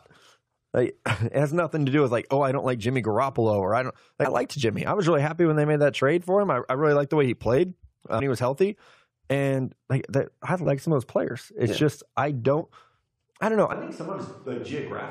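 Brief chirps break into the speech at 4.24, 8.19 and 10.65 s, and again from 12.60 to 12.62 s, each a tiny blip. This is damaged data in the compressed stream: the decoder misreads corrupted frames, loses sync and jumps to the next frame header.

From 13.73 s to the end the speech abruptly turns hollow and roomy, thinner in the bass and about 10 dB quieter, with background noise rising to around 30 dB below the speech. The likely cause is a switch to a distant microphone after the close one dropped out.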